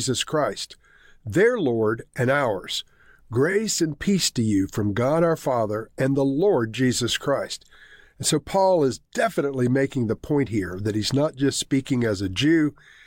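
At 3.51 to 3.53 s, just before "and peace to you", repeated frames produce a brief stutter: one block of about 23.2 ms plays twice, adding that much time. Unlike a dropout, the audio is replayed rather than silenced.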